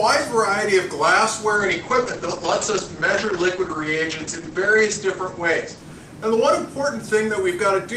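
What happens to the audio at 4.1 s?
Muffled, coarse and watery, with the top end gone above 8 kHz. This is a call bitrate drop running from 1.56 to 7.27 s. The encoder, starved of bits, codes coarsely and trims bandwidth, which fits a fall from around 48 to 9 kbps.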